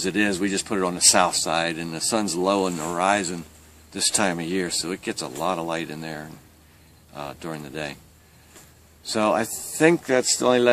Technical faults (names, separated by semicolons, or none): none